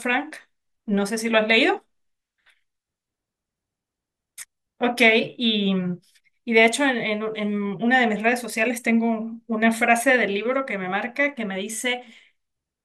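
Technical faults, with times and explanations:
No technical faults detected.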